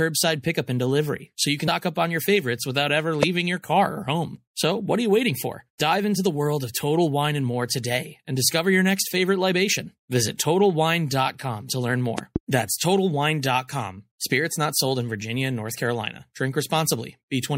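Throughout the speech, MP3 compression damage is plainly audible. Quiet detail swirls and turns watery, and s sounds chirp metallically. This is likely a starved encoder dropping weak frequency content, which fits a 64 kbps encode.

At 1.67 s, compressed frames are skipped. The speech jumps ahead by about a tenth of a second. That fits around five missing 24 ms frames. The join is a short smeared blip, not a hard click.

At 3.23 s, a loud pop cuts in, about 20 dB above the speech. It is sharp and brief. The speech continues beneath it. Between 12.18 and 12.38 s, two more loud pops follow in quick succession. A sudden voltage step or glitch in the playback or recording chain is the likely cause.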